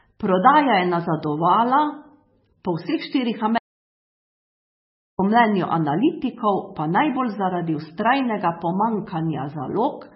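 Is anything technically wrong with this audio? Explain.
Yes, there are two problems. MP3 compression runs through the whole clip, and the audio drops out to silence for about 1.6 s.

MP3 compression, throughout: the speech carries heavy codec damage, likely from MP3 encoding at a very low rate, around 15 kbps judging by the sound. With so few bits, the encoder discards weaker frequency components. These then flicker in and out between frames, giving a watery, swirling texture and smeared consonant attacks. The treble is also cut entirely: nothing remains above about 5.6 kHz, so sibilants sound dull and muffled.

Audio dropout to silence, 3.58 to 5.19 s: right after "po vseh štirih", the sound cuts off abruptly and stays completely silent for about 1.61 s before the speech resumes mid-flow. The gap holds no room tone at all, which points to the input signal being lost while recording continued and silence was written in its place. 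The likely causes are a disconnected device, a failed link or an accidental mute. Whatever was said during those 1.61 s is gone.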